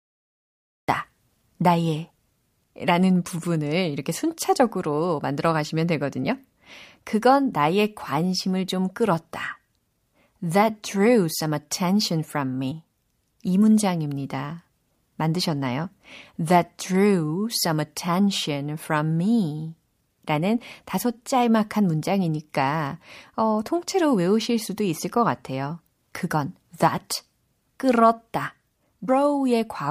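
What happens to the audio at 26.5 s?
Nothing goes wrong at 26.5 s; the speech continues there without any dropout, click, distortion or other fault.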